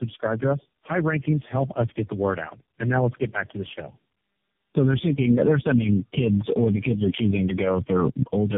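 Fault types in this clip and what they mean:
Tandem speech coding: the sound has been through several low-rate speech codecs in a row, each one decoding and re-encoding what the last one had already damaged, so the losses pile up. Here that shows as speech that's rougher, more muffled and more warbly than any single coder would leave it, with nothing above 3.6 kHz. The build-up of artefacts points to something like four speech codecs in the chain.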